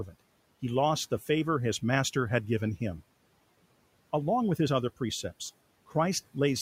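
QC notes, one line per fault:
0.06–0.15 s, speech cut by the noise suppressor: the suppressor mistook the sound just before "he lost the favor" for noise and pulled it down by up to about 13 dB, so it sounds swallowed. The waveform shows a shrunken envelope, and the spectrogram shows faded energy there.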